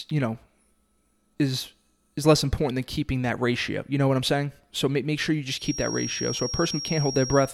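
A speech recording in which, from 5.54 s to the end of the clip, a thin, steady whistle at 5.6 kHz sits behind the voice, roughly 10 dB below it and swelling and fading slowly in level. This is a feedback whistle, likely from the loudspeaker-to-microphone loop sitting right at the edge of feedback. The loop gain at that one frequency is just high enough to keep the tone ringing, but not high enough for it to build into a full howl.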